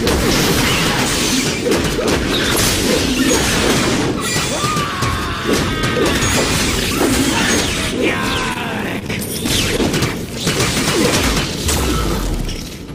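Short concealed packet loss at 8.53, 8.99, 9.07 and 9.77 s: each time about 20 ms of audio arrived too late, and the receiver extended the preceding sound to bridge it, leaving brief smears or wobbles.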